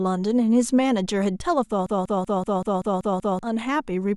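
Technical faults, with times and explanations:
1.86–3.39 s broken-record loop: a 0.19 s speech fragment repeats eight times, likely a stalled stream resending its last fragment while the intended audio is lost.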